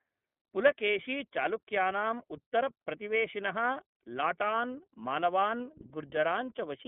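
Throughout the clip the speech passes through the iLBC codec, coding each 30 ms frame independently, which fits its 13.33 kbps mode. The line band runs from 150 Hz to 3.4 kHz, with nothing above 3.6 kHz, so the speech sounds dull, slightly rough and plainly synthetic.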